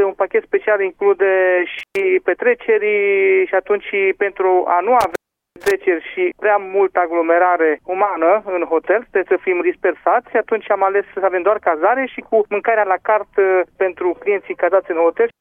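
A loose connection in the signal path causes intermittent contact twice. At 1.79 s the line opens briefly, with about 120 ms of actual dropout inside a crackly stretch lasting to 1.99 s. At 5.01 s it happens again and runs to 5.71 s, with the connection open for about 0.40 s. Each time the sound cuts away abruptly with scratchy crackle at the edges, leaving a faint hiss until contact is restored.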